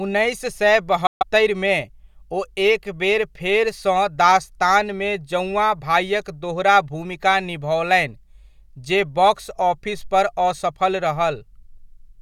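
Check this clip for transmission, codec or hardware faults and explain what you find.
One fault, likely a Bluetooth dropout. From 1.07 to 1.23 s, just after "उन्नैस सए", packets apparently missed their deadline and were discarded, consistent with several lost frames. The speech cuts abruptly to silence for about 140 ms, then resumes further along, as though it had continued unheard.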